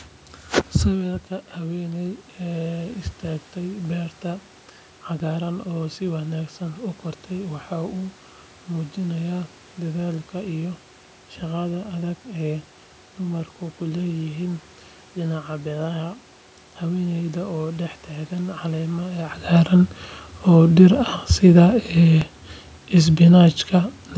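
DC steps occur at 5.2 s, just before "oo si wanaagsan u", and again at 22.2 s. At each moment the waveform's zero line abruptly shifts, as happens when a converter recalibrates or an offset input is switched in, and the offset then drains away as if through a high-pass filter near 5 Hz. Each step is heard as a brief low thump under the speech, which continues unchanged across it.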